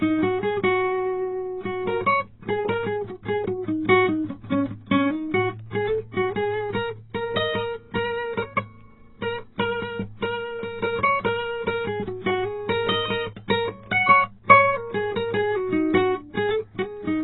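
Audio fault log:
Throughout: AAC compression. The music is heavily damaged, with nothing above 4 kHz, so it sounds dull and muffled, and sustained tones warble while bright transients smear into a fizzy wash. The likely cause is AAC-LC encoding at a very low rate, fitting around 16 kbps, where the encoder drops the high band and starves the rest of bits. A spectrogram shows a hard ceiling at 4 kHz.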